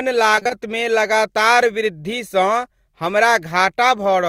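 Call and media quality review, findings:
Repeated packet loss (robotic sound), 0.35–0.51 s: four gaps up to 20 ms, filled by receiver concealment repeating prior audio; choppy sound, not silent dropouts.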